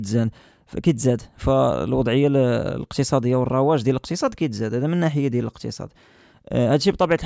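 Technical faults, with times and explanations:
No technical faults can be heard in this speech recording. There is nothing to list with a time or an explanation.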